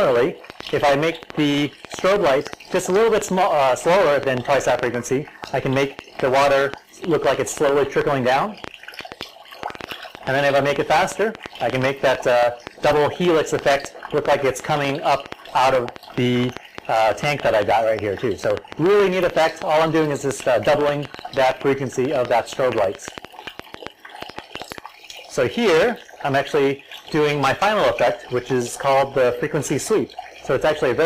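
From 0.05 s to 24.79 s a train of clicks runs over the sound, about six per second at an uneven pace, some 150 in all, each peaking roughly 10 dB above the surrounding level. It is heard as ticking and popping that continues through pauses, likely caused by electrical interference or a faulty connection or power supply. On a waveform the clicks are narrow spikes standing clear of the signal; a spectrogram shows thin vertical broadband lines, irregularly spaced.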